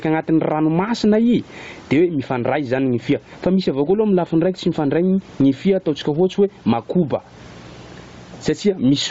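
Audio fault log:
throughout, gain pumping: The speech sounds squashed, with loud and soft syllables pulled close together in level. The gain swings by something like 15 dB. The room noise sits well below the speech. The likely cause is input gain set far too high, with a fast limiter or compressor clamping down on every peak and releasing in the gaps.
throughout, Bluetooth LC3 compression: The voice has a breathy, grainy edge, and the top end sounds hollow and hissy instead of clear. The damage is plainly audible on every phrase. This points to a low-bitrate transform codec, likely Bluetooth LE Audio's LC3. At a rate that fits about 32 kbps with short frames of around 7.5 ms, much of the upper spectrum is discarded and refilled with shaped noise, which produces the rough texture.
2.43 to 9.11 s, mains buzz: From 2.43 s to the end of the clip a steady, raspy buzz sits under the speech, roughly 35 dB below it. 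It is harsher than a plain hum because it is built on 60 Hz, with harmonics climbing into the kilohertz range. Sharp switching spikes, arriving twice in every mains cycle, get into the signal path from something like a dimmer, a rectifier or a missing shield, and those spikes produce the rasp.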